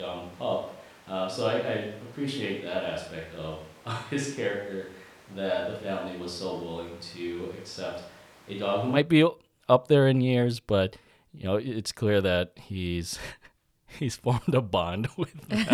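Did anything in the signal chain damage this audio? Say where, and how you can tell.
Yes. From the start of the clip until 8.95 s the speech sounds roomy and hollow, with less bass, a level about 5 dB lower, and background noise roughly 25 dB below the speech. At 8.95 s it snaps back to a close, full sound. The fault is at the capture stage, likely a switch to a distant microphone. The close microphone's feed was missing, so a farther pickup captured more room reflection and ambient noise relative to the voice.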